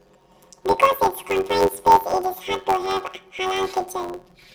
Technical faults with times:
0.00-4.54 planar audio read as interleaved

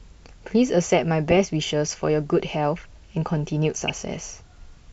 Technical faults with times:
1.28-1.37 DAB burbling
3.82-3.90 DAB burbling

